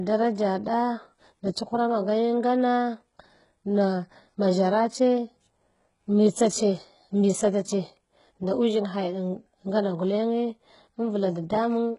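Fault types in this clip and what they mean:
HE-AAC compression: the speech keeps a bright but gritty, metallic treble that stops at about 11.1 kHz, likely spectral band replication rebuilding it from copied lower bands at roughly 12 kbps. Unlike a plain low-pass, the top is present, just mismatched with the speech's harmonics.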